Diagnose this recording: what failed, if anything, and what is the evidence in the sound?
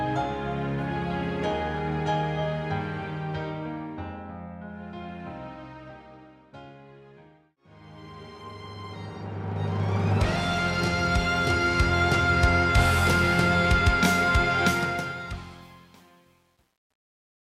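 The closing fade-out, which starts around 14.6 s and runs to the end, turns gritty from 14.65 s and is at its worst from 15.38 s onward. This is truncation distortion on a fade at the sample-format conversion stage: undithered, requantised to what sounds like a 10-bit word length, so the fading waveform collapses into coarse steps.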